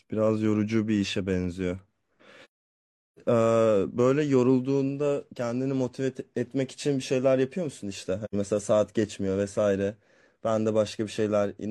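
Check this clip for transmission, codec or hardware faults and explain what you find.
There's AAC frame loss with muting twice: a soft-faded gap from 2.44 to 3.19 s (about 0.73 s, roughly seventeen frames' worth) and a short one from 8.24 to 8.35 s. The decoder zeroes the missing frames, so the audio fades out and back in.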